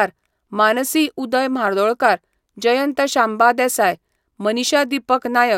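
Speech recording, no technical faults detected.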